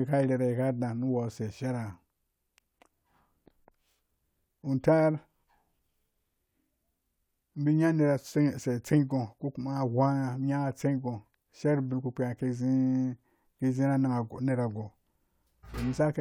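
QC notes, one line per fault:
No faults found on review; the speech runs without interruption or defect for its full length.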